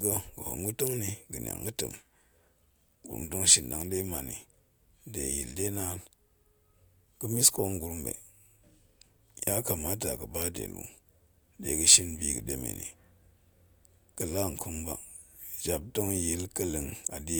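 Listening to the speech, nothing stood out as a technical fault at any point.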